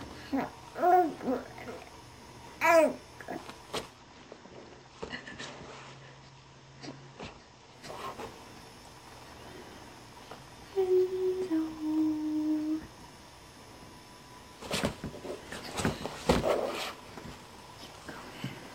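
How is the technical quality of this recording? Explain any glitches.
One glitch stands out. From 3.82 to 7.89 s, digital radio blending to analogue occurs. The receiver lost its digital stream and cross-faded over 183 ms to the FM broadcast. The level drops about 6 dB. Hiss appears, roughly 30 dB down.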